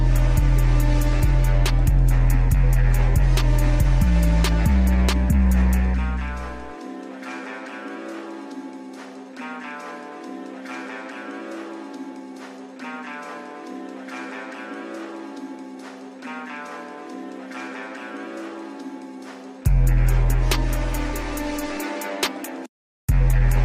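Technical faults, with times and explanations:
No technical faults can be heard anywhere in the audio. There is nothing here that calls for a time or an explanation.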